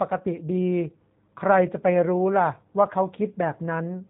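From start to finish the speech sounds narrow, slightly rough and synthetic, with nothing audible above 4 kHz. That is the G.729 codec, plainly audible here. It does not store the waveform itself. Instead it rebuilds each 10 ms frame from a vocal tract filter, a pitch predictor and a few pulses. The sound points to the 8 kbit/s G.729A variant.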